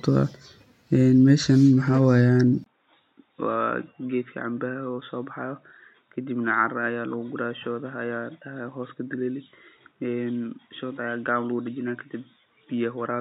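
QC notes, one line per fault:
2.64 s to end, input switched to a poorer device: after a brief gap of about 20 ms the speech turns dull and boxy, with nothing above 3.8 kHz, and its level drops by roughly 10 dB. A new, faint noise floor sits well below the speech. The abrupt, lasting change in bandwidth, tone and level at one instant likely comes from the recording input changing over to a narrower-band microphone or a headset call profile, each with its own noise character.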